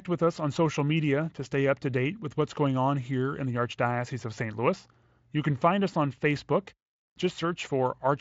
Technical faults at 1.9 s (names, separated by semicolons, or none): none